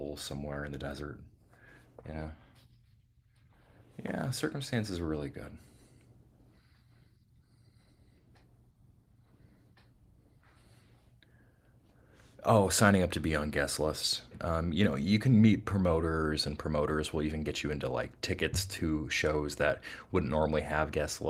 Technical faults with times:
none

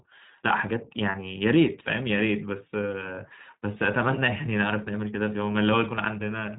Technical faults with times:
0.00-6.59 iLBC codec
1.12-1.15 lost iLBC frames

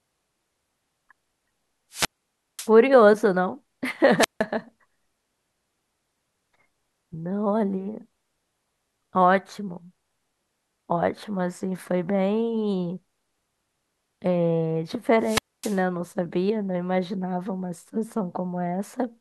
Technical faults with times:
1.90-2.71 wireless microphone squelch dropout
4.18-4.44 wireless microphone squelch dropout
15.19-15.83 wireless microphone squelch dropout

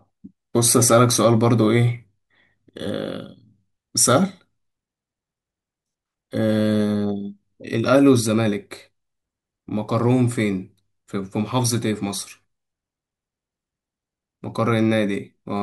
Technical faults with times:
none

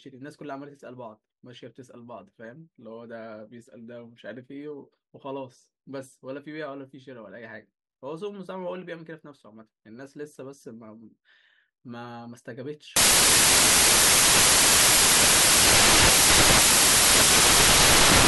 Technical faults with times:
12.96-18.27 samples built from the wrong bytes

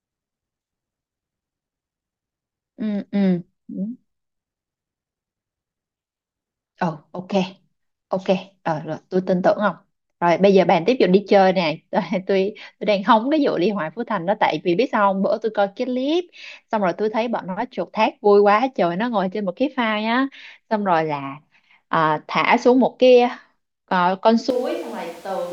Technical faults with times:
24.50-25.53 switch to a distant microphone

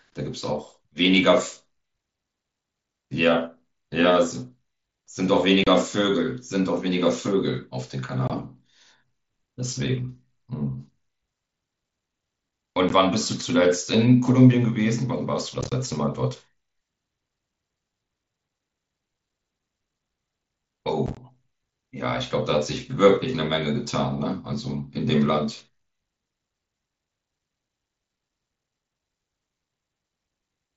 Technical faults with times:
5.64-5.67 unconcealed Bluetooth headset packet loss
8.28-8.30 unconcealed Bluetooth headset packet loss
12.89 unconcealed Bluetooth headset packet loss
15.61-15.72 unconcealed Bluetooth headset packet loss
21.06-21.17 unconcealed Bluetooth headset packet loss

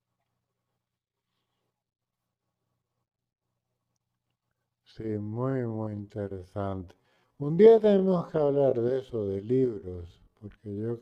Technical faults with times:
5.16-11.02 time-stretched section

